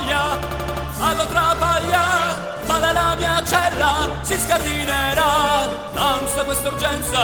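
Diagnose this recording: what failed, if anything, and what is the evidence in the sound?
System hang loop, 0.43 to 0.85 s. This is a driver or buffer stage failure. The same 85 ms fragment repeats exactly five times, producing a rapid machine-gun stutter at about 11.7 Hz, which fits a 4096-sample buffer. The host or driver stalled while the audio hardware kept reading the same ring buffer segment. When processing resumed, the flow carried on with next to no audio missing.

Call bitrate drop, 1.99 to 4.91 s. This failure sits in the codec, driven by the network. The audio loses detail and takes on a coarser, rougher texture as the encoder falls from 32 kbps to 18 kbps. It stays at the lower rate for about 2.35 s before recovering. The call's bandwidth estimate fell, so Opus had fewer bits per frame and quantised the signal more crudely.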